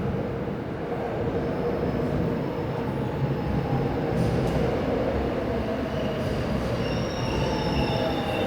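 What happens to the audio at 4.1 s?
Nothing goes wrong at 4.1 s: the sound plays through that moment intact, with no dropout, click, distortion or other fault.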